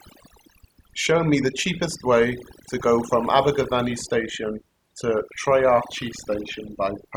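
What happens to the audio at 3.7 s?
At 3.7 s you're hearing overdone noise removal that runs through the whole clip: bands near the noise floor get gated out, so the background twinkles.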